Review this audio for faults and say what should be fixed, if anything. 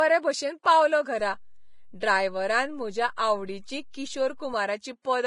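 Heavy codec damage runs through the whole recording: the treble sounds hissy and grainy, tones are roughened, attacks are blurred, and nothing is present above 10.6 kHz. The likely cause is low-bitrate Vorbis encoding, with the damage pointing to roughly 28 kbps. The coder keeps a smooth spectral floor but quantises the residue so coarsely that fine detail turns into noise of similar energy. On a spectrogram this shows as a hard ceiling at 10.6 kHz with speckled, patchy energy below it instead of clean harmonic lines. Encode at a higher quality setting, or keep an uncompressed master.

Pre-echo appears at 0.63 to 0.65 s (spread over 22 ms) and at 2.00 s (about 19 ms). In each case a short hiss arrives just before a sharp onset, and the attack sounds softened. The transform codec spreads quantisation noise evenly across a block, so noise sized for the loud attack also fills the quiet moment ahead of it. 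A spectrogram shows a faint broadband smear leading each onset, and the waveform shows low-level fuzz before the transient. A codec with finer block switching or a higher bitrate would prevent it.

A DC step begins at 1.20 s and holds until 4.54 s. At each of those points a low thump or click is heard, while the sound itself carries on unchanged. The waveform's zero line jumps to an offset, stays displaced for about 3.3 seconds, and then steps back. This fits a converter recalibrating or an input with an offset being switched in. On a waveform view the whole trace visibly rides above or below centre between the two steps, and a spectrogram shows brief low-frequency bursts at each edge. A DC-blocking high-pass filter and stable input switching would prevent it.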